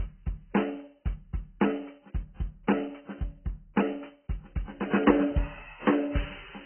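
From start to finish the music sounds dull and smeared, with nothing above about 3.1 kHz and a watery, warbling texture on held tones. That's likely heavy AAC compression at a very low bitrate, where the encoder drops the top band and starves what's left of bits.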